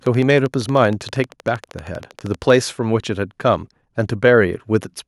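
From 0.06 s to 2.51 s a train of clicks ticks over the speech at a steady 12.7 per second, around thirty in all, each peaking somewhat above the speech level and audible in the pauses too. The pulses repeat at an even pace with much the same shape, most likely interference from nearby equipment or a faulty connection or power supply. That regularity separates them from random crackle, and since the speech never drops out between clicks, this is not a buffer dropout.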